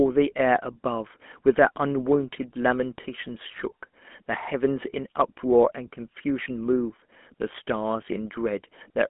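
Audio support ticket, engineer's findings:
Speech throughout: buzzy, gravelly roughness, plainly audible. Band limited to about 200 Hz to 3.4 kHz, nothing above 3.8 kHz. Component: GSM full-rate codec, consistent with 13 kbps. Mechanism: vocal-tract model driven by a coarse pulse excitation that discards fine detail.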